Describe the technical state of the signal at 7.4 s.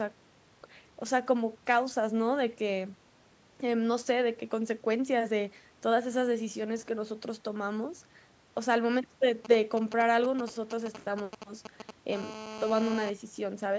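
At 7.4 s the signal is intact, with no fault present; the call microphone processing leaves only its usual removal of the lowest bass and nothing above 8 kHz.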